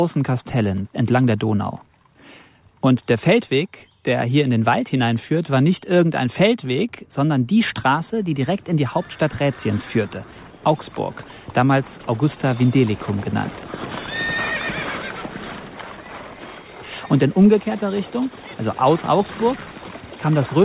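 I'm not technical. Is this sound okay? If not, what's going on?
Yes, this sound is fine: nothing in it dropped out, glitched or got distorted, so there's nothing here you need to worry about.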